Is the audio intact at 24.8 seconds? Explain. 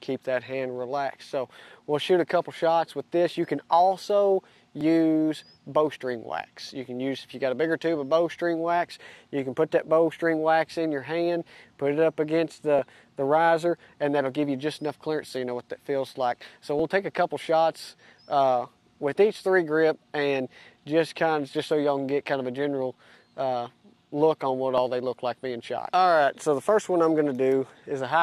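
No. At 24.78 s an overlap between stream segments trims away real audio where two segment time stamps clash. The waveform jumps, heard as a tiny skip.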